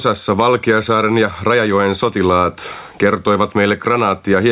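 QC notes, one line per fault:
Throughout: gain pumping. The gain swings by about 15 dB. The likely cause is input gain set far too high, with a fast limiter clamping peaks. Loud and soft parts sound squashed together.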